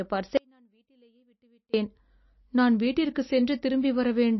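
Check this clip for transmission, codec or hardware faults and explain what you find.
Two faults are present in this speech clip: plainly audible codec damage throughout, and one long dropout near the start.

From 0.37 s to 1.74 s the speech cuts out for about 1.36 s, leaving only a faint trace of the signal roughly 40 dB below normal level. This is an audio dropout to a faint residue, likely a break in the signal feed while the path downstream stayed live, so a weak leak still comes through. Unlike a natural pause or a fade, both edges are abrupt, and the gap is not true silence.

Across the whole clip the sound is watery and swirly, with smeared consonant attacks and nothing above 5.8 kHz. This is likely MP3 compression at a very low rate, consistent with roughly 27 kbps. Short of bits, the encoder has cut the treble at a fixed frequency and dropped weaker spectral lines, which flicker on and off between frames. 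A simple low-pass filter would dull the top end too, but it would not produce this warbling, chirping texture.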